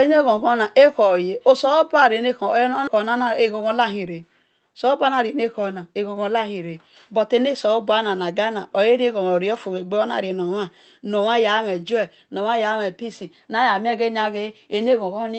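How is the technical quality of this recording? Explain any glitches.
The recording has one glitch, heard through call audio that is band-limited to about 8 kHz. At 2.87 s there is a skip ahead: about 0.4 s of speech was dropped in transit or by an overflowing jitter buffer, and playback jumps forward almost seamlessly.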